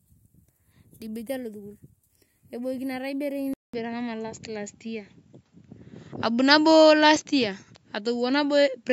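Speech with a 200 ms dropout at 3.54 s, after which the sound narrows to nothing above 7.6 kHz, shifts level by about 5 dB and gains faint noise, likely an input switched to a poorer device.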